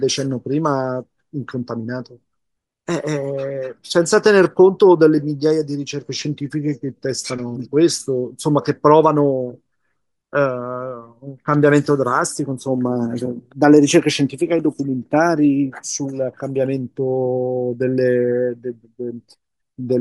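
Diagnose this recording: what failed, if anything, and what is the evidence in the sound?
At the codec stage, the speech was likely passed through Bluetooth LC3 compression at a modest bitrate. Throughout the clip the upper frequencies sound thin, grainy and breathy, because the encoder discarded much of the high band and the decoder filled those regions with shaped noise.

At the wireless transport stage, there are lost LE Audio frames at 1.50 s. A 10 ms stretch, which fits one missing frame, was concealed by repeating the previous spectrum with randomised signs.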